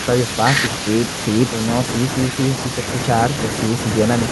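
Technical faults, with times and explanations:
No technical faults can be heard in this speech recording.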